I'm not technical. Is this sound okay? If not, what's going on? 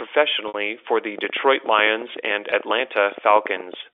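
No. Packet loss with pitch repetition: parts of the signal went missing in transit, so the receiver repeated the last sound slice, giving a buzzy hold that fades into silence at 0.48 to 0.54 s, just before "for the", and a brief buzzy hold at 2.50 s.

A train of clicks, likely from nearby equipment interference or a struggling connection, adds about thirty uneven ticks, roughly nine a second, from 1.19 s, right after "for the", to the end.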